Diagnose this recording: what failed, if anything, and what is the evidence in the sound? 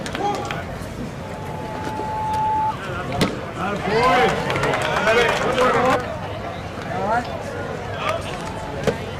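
An acoustic loop formed between a microphone and the loudspeaker it feeds, with gain above unity at 868 Hz. The result is loudspeaker feedback squeal from 1.22 to 2.74 s: a pure 868 Hz tone that swells over about a second until it sits roughly as loud as the sound itself.

A gain stage drove the converter past full scale, so peaks were sliced flat. This hard clipping appears as a brief crackle at 3.21 to 3.25 s and again at 8.87 s, overdriven by about 13 and 12 dB. From 3.93 to 5.96 s it becomes sustained harsh fuzz, about 10 dB over.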